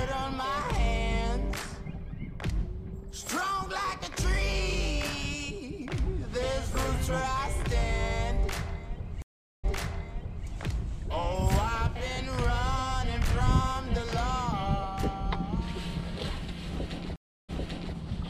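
At 9.22 s the audio drops out for about 415 ms, then comes back from roughly 0.84 s earlier, repeating a stretch, and the fault settles by 10.47 s. A stream reconnect like this happens when the connection breaks and a fresh decoder rejoins with a resent burst, fading in briefly. The same happens at 17.16 s, with 327 ms of silence and a 0.46 s jump back, ending by 17.95 s. Spectrogram and waveform show a fully blank column, then repeated patterns rising from near-zero.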